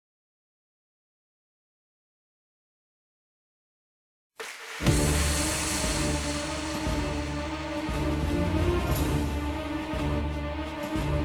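Sample clock jitter runs through the whole clip: the converter's clock wanders by around two microseconds, so each sample lands slightly off time. The resulting error, roughly 30 dB below the signal, is heard as a grainy hiss that swells on loud, bright passages and disappears in quiet gaps.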